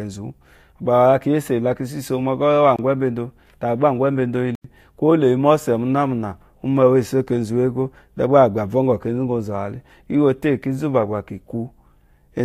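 At 2.76 s and 4.55 s the speech drops into a block of digital silence, about 25 ms and then 93 ms long, the second fitting a 4096-sample buffer left unfilled. With no fade, the sound cuts out and back abruptly: a brief hole first, then a longer one.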